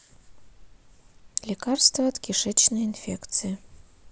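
No technical faults are audible anywhere in the speech.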